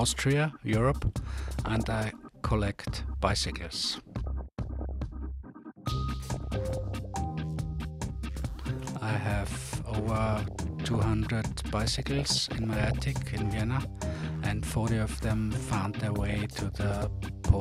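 You've got six stretches of DAB burbling: 1.47–2.27, 3.93–4.91, 6.34–6.94, 10.26–11.02, 11.95–12.94 and 16.05–17.04 s. Weak reception lets bit errors slip past correction into the MP2 data, so individual sub-bands get short blips of noise over the sound.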